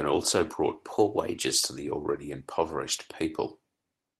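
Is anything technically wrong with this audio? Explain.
Yes. From 0.93 to 1.64 s the speech plays about 5.6% fast and roughly 94 cents sharp, then snaps back. This is likely a drift correction step, where clock-matching software briefly changed the playback rate. Speed and pitch shift together, unlike a pitch-only glitch.

At 2.55 to 2.61 s there is a lost packet rebuilt from error correction. About 40 ms plays as rougher, noisier low-bitrate copies, which fits two lost packets. Unlike concealment, there's no gap or smear.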